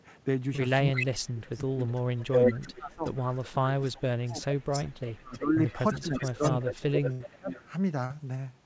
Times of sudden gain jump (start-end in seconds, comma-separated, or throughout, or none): none